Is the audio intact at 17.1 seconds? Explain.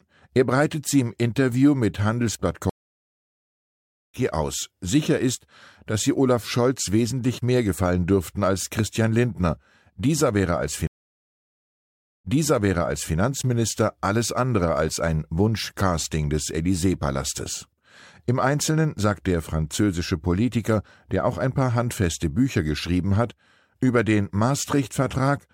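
Yes, the audio is intact at 17.1 seconds, without any dropout, glitch or other fault.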